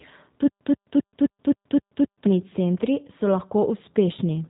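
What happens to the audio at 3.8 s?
At 3.8 s the speech carries the same G.729 codec damage heard from start to finish, with a rough, slightly synthetic quality that fits an 8 kbit/s VoIP codec. Each 10 ms frame is rebuilt from a vocal tract filter, a pitch predictor and a few pulses rather than the original waveform. On a spectrogram, energy stops sharply at about 3.8 kHz, leaving empty space above. The waveform looks less detailed than natural speech.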